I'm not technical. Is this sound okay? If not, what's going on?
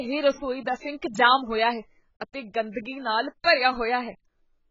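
No. Throughout, the speech sounds dull and smeared, with nothing above 7.5 kHz, likely from heavy AAC compression squeezing the file too small.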